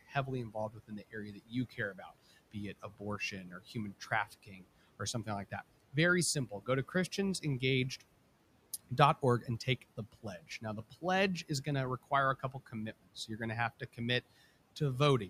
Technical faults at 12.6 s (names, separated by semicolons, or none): noise suppressor artifacts; speech cut by the noise suppressor